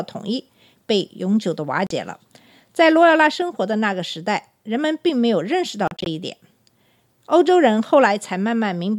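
The speech clip has two spells of short silent holes, probably from a Bluetooth dropout. At 1.87 s the sound cuts out for about 37 ms. Between 5.88 and 6.06 s, brief gaps totalling 93 ms are scattered across 187 ms, each no longer than 37 ms. The speech resumes ahead of where it stopped, so audio is lost rather than merely delayed. That separates it from a buffer underrun, where playback stalls and continues from the same point.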